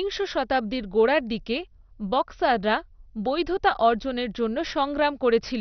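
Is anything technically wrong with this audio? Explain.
Yes. MP2 compression runs throughout the speech. Nothing is heard above 6.2 kHz, and a heavy gurgling, granular distortion sits on the sound. The likely cause is MPEG Layer II coding starved of bits, which fits a rate near 48 kbps. Upper sub-bands drop out and flicker, and the remaining bands are coarsely quantised.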